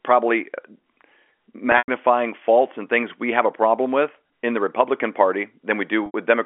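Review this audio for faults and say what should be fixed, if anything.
At 1.72 to 1.88 s, just before "faults and things we", and again at 6.06 to 6.14 s, the speech briefly holds on a buzzy, repeated tone that fades toward silence before the voice returns through a short cross-fade. This is packet loss with pitch repetition. The receiver bridged each gap by looping the last pitch period. The first loss is 120 ms scattered over 160 ms, with a longest run of 100 ms, and the second is 80 ms. Both durations fit runs of 20 ms packets. A larger jitter buffer, forward error correction or a more reliable network path would prevent these gaps.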